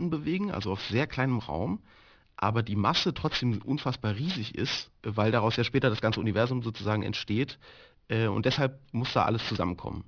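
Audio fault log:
throughout aliasing: the speech was downsampled without an anti-alias filter, which fits a drop to an 11 kHz rate, so content above the 5.5 kHz fold point mirrors back down as unrelated tones, roughly 10 dB below the signal, making sibilants gritty and metallic.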